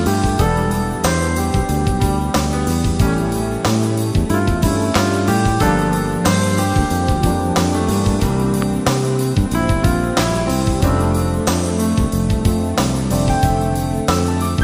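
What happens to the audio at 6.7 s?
Nothing goes wrong at 6.7 s; the audio runs through that moment intact, with no dropout, click or distortion.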